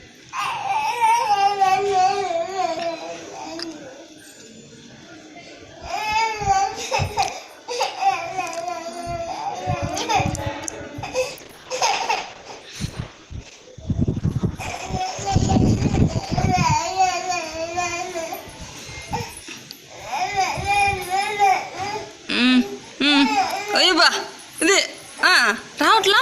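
Around 11.3 s there's a call bitrate drop. The bandwidth estimate fell, so the encoder got told to spend far fewer bits, and the coarseness fits a fall from roughly 64 kbps down to about 11 kbps. The sound goes rough and watery, and the top end gets shaved off so it sounds muffled. It sits at that low point for about 5.2 s before things recover at 16.55 s.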